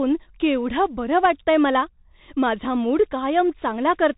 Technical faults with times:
0.00-4.17 Bluetooth CVSD headset codec

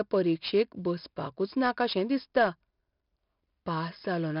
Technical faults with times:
0.00-4.40 4-bit ADPCM compression

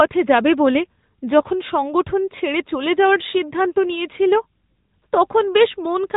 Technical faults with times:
0.00-6.17 AMR narrowband mobile codec

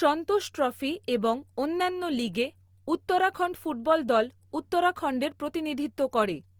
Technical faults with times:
0.00-6.60 Opus compression

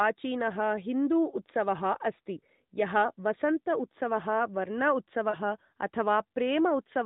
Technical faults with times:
5.30-5.36 lost AMR speech frames

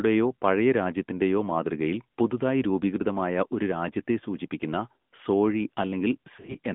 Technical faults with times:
0.00-6.74 AMR narrowband mobile codec
6.36-6.56 lost AMR speech frames

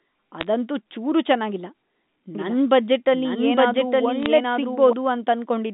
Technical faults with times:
0.41-0.47 bit errors on a digital phone line
2.35-4.93 doubled audio track
4.23-4.26 bit errors on a digital phone line

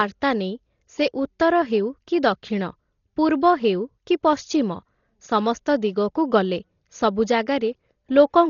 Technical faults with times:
0.00-8.50 Dolby Digital compression

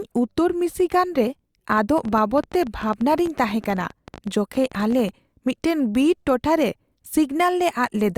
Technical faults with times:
1.72-5.10 train of clicks

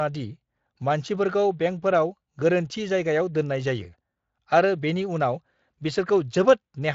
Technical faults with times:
none

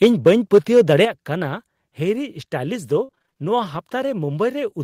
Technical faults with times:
0.03-0.81 microphone overload
1.05 microphone volume stepped down
3.03-3.38 repeated packet loss (robotic sound)

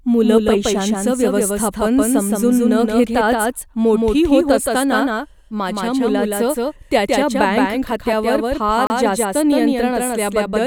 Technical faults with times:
0.00-10.66 doubled audio track
8.87-8.90 block of digital silence

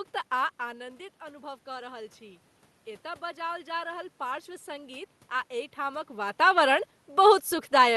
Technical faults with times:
0.58-2.49 automatic gain rising
3.19-6.67 automatic gain rising

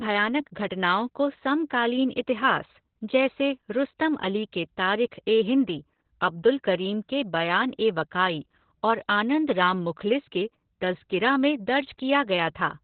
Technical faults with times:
0.00-12.83 Opus voice compression

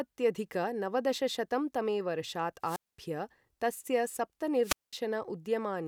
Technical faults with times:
2.62-3.00 wireless microphone squelch dropout
4.62-4.93 wireless microphone squelch dropout

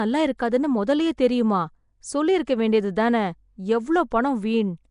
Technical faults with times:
0.00-4.91 Nellymoser compression
4.11 pre-echo

